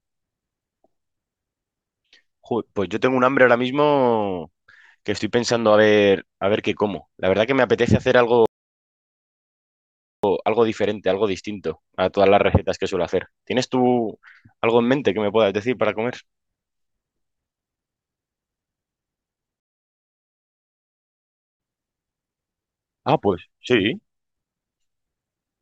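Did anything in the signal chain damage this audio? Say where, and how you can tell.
Yes, two playback stalls: the player likely starved or blocked, so the speech drops to silence at 8.46–10.24 s and 19.60–21.60 s, then resumes.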